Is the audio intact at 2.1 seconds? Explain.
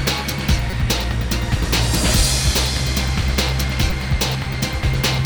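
Yes, the audio is intact at 2.1 seconds, with nothing at that moment breaking, dropping out or distorting the sound.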